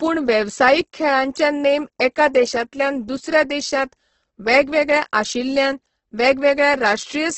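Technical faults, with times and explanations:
throughout Opus compression: speech sounds rough and grainy, nothing above 8.2 kHz, likely heavy Opus music-mode coding at a bitrate that fits about 12 kbps.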